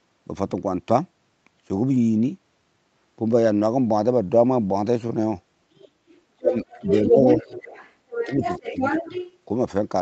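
At 1.93 to 1.95 s, one 20 ms packet was lost and rebuilt from error correction. The decoder played a rougher, noisier low-bitrate copy, so there is no gap.

From 5.75 to 5.89 s and 6.12 to 6.17 s, the other side's voice is leaking through faintly, about 30 to 35 dB down. A loudspeaker echo the canceller likely missed causes this.

The same leak returns at 6.51 to 7.94 s and 8.13 to 9.37 s, now nearly as loud as the speech.

Speech is suppressed in double talk at 6.37 to 6.56 s, 7.10 to 7.39 s, 8.07 to 8.42 s and 8.61 to 8.76 s. The talker dips by up to about 30 dB, likely because the canceller turned both voices down.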